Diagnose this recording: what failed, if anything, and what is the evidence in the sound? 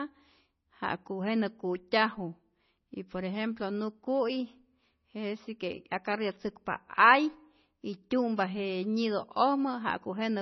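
The codec stage is the likely culprit, with heavy MP3 compression running the whole length of the speech. Nothing is audible above 6 kHz, where the encoder has cut the treble outright, and the remaining band has a watery, swirling texture as weak frequency lines drop in and out between frames. The s sounds turn metallic and consonant attacks smear. That degree of damage fits a bitrate down around 24 kbps.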